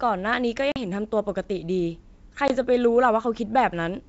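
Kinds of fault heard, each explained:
Packet loss on an ADPCM call: dropped packets leave abrupt silent holes near 0.72 and 2.48 s, and the out-of-step decoder brings the sound back rough until it resyncs.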